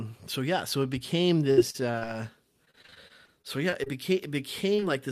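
Packets in this speech recording were repeatedly lost or late during two stretches, producing repeated packet loss with a robotic sound. The first runs from 1.39 to 2.03 s, just after "yeah so it became". It has six gaps, the longest 66 ms, and about 169 ms of audio in total (27% of the stretch) is synthesised by extending the preceding sound. The second runs from 2.65 to 3.88 s, with thirteen shorter gaps of at most 29 ms, and about 248 ms (20%) is patched. In both, the constant patching of hole after hole makes the voice choppy, with fragments audibly missing. Near the end, two short concealed packet losses fall back to back, at 4.76 to 4.80 s and 4.80 to 4.84 s. Each drops roughly 20 ms of the call, which the receiver bridges by continuing the last sound before blending back into the real signal. Together they leave a brief smear or wobble around 4.8 s.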